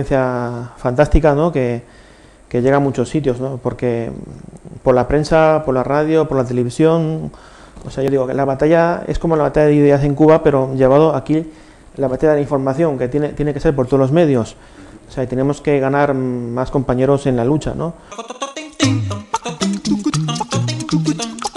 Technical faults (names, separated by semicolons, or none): none